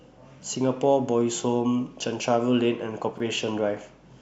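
Speech recording with chunks out of order: between 3.12 and 3.20 s, one 21.33 ms chunk arrived late and played three chunks after its proper place. No audio is lost, but the misplaced chunk and its three hard joins make a brief jumbled stutter.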